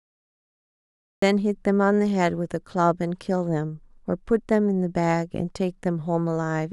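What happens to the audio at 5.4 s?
Nothing goes wrong at 5.4 s; the speech continues intact through that moment, with no dropout, click or distortion to be heard.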